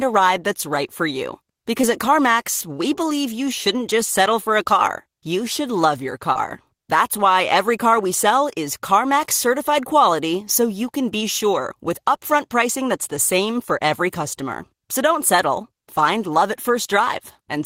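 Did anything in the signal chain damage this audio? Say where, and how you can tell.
Yes, network stage: short concealed packet loss at 1.81–1.85 s and 6.33–6.37 s. About 20 ms went missing each time, and the decoder patched it, leaving brief smeared wobbles.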